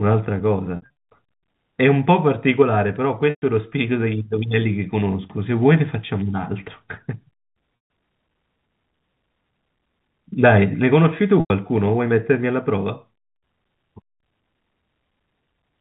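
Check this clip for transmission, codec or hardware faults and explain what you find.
Four brief dropouts of packet loss with pitch repetition occur in the speech, heard over a narrowband G.711 telephone path whose 4 kHz ceiling is audible. They fall at 0.76–0.93 s, 3.30–3.42 s, 7.76–7.90 s and 11.40–11.50 s, each covering 100–140 ms of missing audio. The first is scattered across 200 ms, with its longest run lasting 60 ms. The receiver fills each gap by looping the last pitch period, which sounds like a held, buzzy note. On a spectrogram this shows as frozen, evenly spaced harmonic stripes, and on the waveform as identical repeating cycles that taper off.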